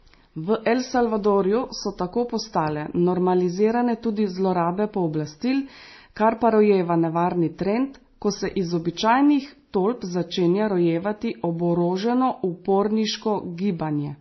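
Transcoding between lossy codecs runs through the whole of this speech clip. Nothing is heard above about 5.9 kHz, and two distinct layers of coding damage sit on top of each other: two different sets of artefacts heard together. That combination likely comes from a low-rate MP3 pass, around 24 kbit/s, later re-encoded as WMA at roughly 48 kbit/s. The second encoder wasted bits reproducing the first one's errors, and the lowest band limit in the chain survived.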